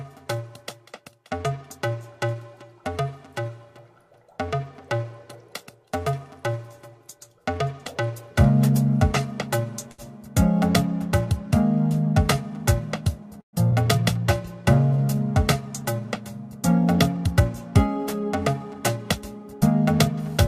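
At 9.91 s the audio hangs on one sound for about 69 ms before resuming at 10.01 s with a faint buzzy smear. This is a short stall from a late packet: the jitter buffer ran dry, so the receiver stretched the last sound until the packet arrived, and nothing is lost. From 13.41 to 13.56 s there is a call audio freeze: a brief continuation of the sound fades into about 110 ms of silence, 122 ms in all, and the audio then picks up where it stopped. The likely cause is packets held up in transit, emptying the buffer. Just after, at 13.71 to 13.75 s, the audio lurches forward: a skip ahead drops roughly 70 ms, joining the two sides almost directly. A stretch of audio was dropped while later audio was already waiting, which also cut the built-up delay by around 50 ms. From 14.93 to 15.16 s the sound drags to 82% speed at unchanged pitch, drawn out. This is jitter buffer slow-down: the receiver repeated pitch periods to add 51 ms of reserve. 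From 16.48 to 17.41 s the audio runs slightly fast at 104% speed, again at the same pitch. This is jitter buffer speed-up: the receiver trimmed short pitch-period pieces, around 40 ms in total, to shed excess delay.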